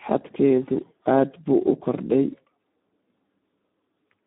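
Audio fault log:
Throughout, Speex codec: the speech sits in a narrow line band of about 200 Hz to 3.7 kHz, with nothing above 3.8 kHz. The damage is heavy: hoarse, noisy and edging toward robotic, which fits an 8 kbps setting. Too few bits reach the CELP excitation, so the rebuilt voicing turns rough. Simple telephone band-limiting would leave the voice clean within the band. Here the in-band buzz and grit mark a starved speech codec.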